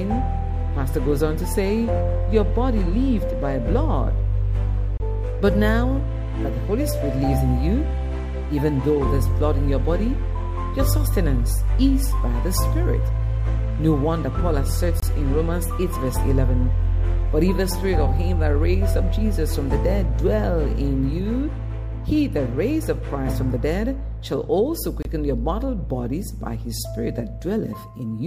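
At 4.98–5.00 s, 15.00–15.03 s and 25.03–25.05 s the sound drops out for about 25 ms each time. These are gaps between chunks. The audio was handled in 10-second pieces, and silence was left at each join, so playback is briefly interrupted. Each gap is a short hole with abrupt edges. On a waveform each shows as a flat, empty stretch inserted cleanly into the signal. On a spectrogram it appears as a thin vertical blank band across all frequencies, repeating roughly every 10 s.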